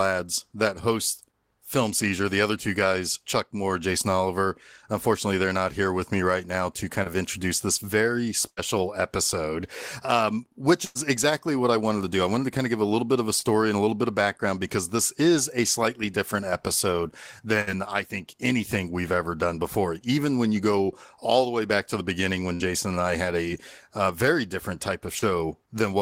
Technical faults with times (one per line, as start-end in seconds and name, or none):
7.03-7.07 short concealed packet loss
8.49-8.59 burst of packet loss
10.85-10.97 burst of packet loss
13.39-13.43 short concealed packet loss
17.61-17.69 burst of packet loss
22.55-22.66 burst of packet loss
25.19-25.24 short concealed packet loss